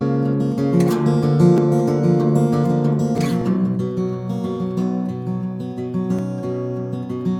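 At 1.58, 3.18 and 6.19 s the music jumps, most likely a dropped buffer (overrun): the samples weren't collected before the hardware overwrote them, so roughly 20 ms vanishes and the two sides butt straight together, with no gap.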